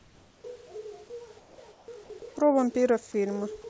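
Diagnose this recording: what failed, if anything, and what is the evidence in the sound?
Comfort noise in place of the background at 0.00–0.44 s, 1.40–1.58 s and 1.72–1.88 s, in call processing. Each pause loses the room's textured background to a steady, featureless hiss about 3 to 4 dB quieter. This is likely receiver-generated noise filling gaps while discontinuous transmission stopped sending.

Onset clipped by the voice detector at 0.42–0.44 s, also in call processing. The speech enters abruptly, without its soft beginning, and its first 20 ms are replaced by the same flat noise. The sender's voice detector was likely slow to register that sound had resumed.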